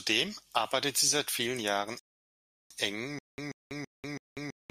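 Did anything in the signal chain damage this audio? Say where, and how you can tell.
Yes. Rebuffering stall, 1.99 to 2.71 s, at the playback buffer: the speech drops to silence for 711 ms, then resumes exactly where it stopped.

Stutter with silent gaps from 3.19 s to the end: a 135 ms burst repeats four times, each followed by 194 ms of silence, likely from a stalled stream replaying its last fragment.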